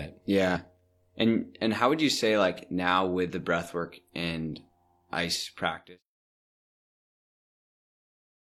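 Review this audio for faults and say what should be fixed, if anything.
Damaged data in the compressed stream at 0.51–0.57 s and 3.25–3.30 s. The decoder loses sync on the bad frames and glitches until it finds the next header. To prevent it, pull a clean copy from the source and checksum files on transfer so corrupted frames never reach the decoder.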